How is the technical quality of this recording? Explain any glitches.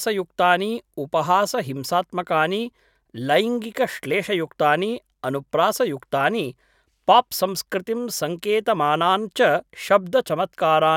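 No glitches or technical faults can be heard anywhere in the recording.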